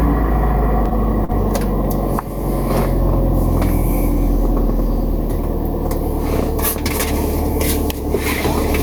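Throughout the clip the level pumps, swinging by around 5 dB, so loud and quiet moments sit close together and the audio feels squashed. This gain pumping is likely from gain set too high, with a fast limiter pulling it down on each peak.

From 0.85 to 1.34 s the sound drags through four brief hitches, the longest about 40 ms and 61 ms in all, where the last sound is stretched rather than cut. This repeated stalling (stutter) comes from packets arriving late, emptying the jitter buffer each time.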